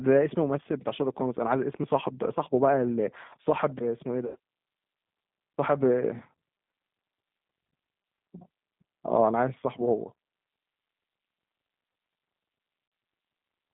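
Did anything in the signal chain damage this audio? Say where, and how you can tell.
Yes. At the codec stage, the whole clip went through a G.729 codec at 8 kbit/s. The speech sounds rough and slightly synthetic throughout. A spectrogram shows energy only from about 150 Hz to 3.6 kHz, with an empty band above and smeared, grainy harmonics.

On the network side, VoIP packet loss concealed by the speech codec shows up at 4.27–4.36 s, where about 80 ms is rebuilt, and at 12.88–12.92 s, where 40 ms is rebuilt. The decoder repeats its last pitch and filter at falling gain, producing a fading buzzy tone or coloured noise. On the waveform this looks like regular, decaying cycles, and on the spectrogram like frozen, flat harmonics.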